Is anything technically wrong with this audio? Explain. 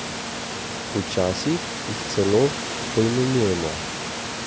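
No, nothing technically wrong stood out on listening to this speech recording.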